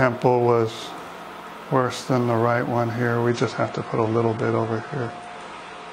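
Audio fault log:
3.29–5.93 s: adaptive stream at a lower bitrate. With no gap, the treble suddenly ends at 9.9 kHz and codec smearing thickens, which fits a switch from about 96 to 32 kbit/s AAC. Unlike a dropout, the sound never breaks. Unlike a plain low-pass, artefacts rise too.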